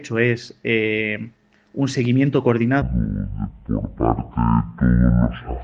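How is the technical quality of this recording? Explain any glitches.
The recording has one clear glitch in its second half. From 2.82 s to the end, a section at the wrong speed plays at half speed, dragging and dropping roughly ten semitones, likely from playback against a mismatched clock.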